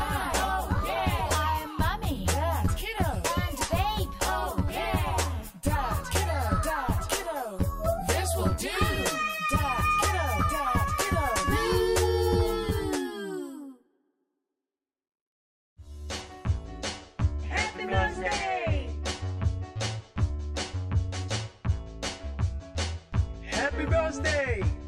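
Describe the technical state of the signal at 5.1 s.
At 5.1 s you're hearing channel delay (comb filtering), and it runs through the whole clip. One channel lags the other by roughly 10 ms, so summing them to mono carves evenly spaced notches starting near 50 Hz. That leaves the sound hollow and phasey.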